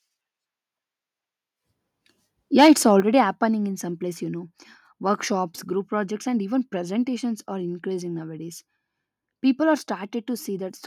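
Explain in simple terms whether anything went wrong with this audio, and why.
Between 2.58 and 2.72 seconds, the loudest part of the speech turns harsh and crackly, with a rough, broken edge instead of a clean sound. This is microphone overload. The microphone was most likely set too sensitive, so the strongest moments were louder than the recording could hold. Their tops were sliced off flat, and that flattening is what produces the crackle on this short stretch.

At 3.0 seconds, right before "happening in some", the whole recording suddenly gets quieter in one step. The speech and the background both drop together, not gradually. This is the microphone volume being stepped down. Shortly after the crackly moment, the calling software likely noticed the input was too hot and turned the microphone's level down at once, which is why the drop comes just after the distortion.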